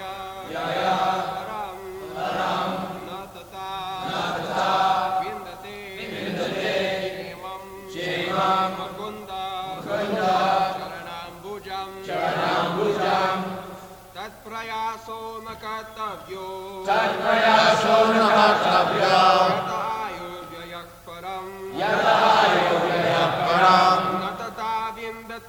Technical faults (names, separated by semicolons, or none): none